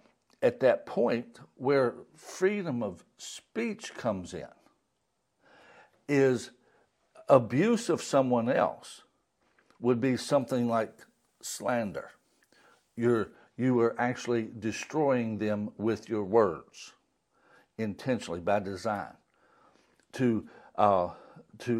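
From 10.41 to 13.31 s the speech has pre-emphasis left on: the treble lift used for transmission, matching the 50 microsecond FM curve, was never undone by de-emphasis. The top end sits about 11 dB above 1 kHz at 10 kHz, making the sound thin, bright and sibilant.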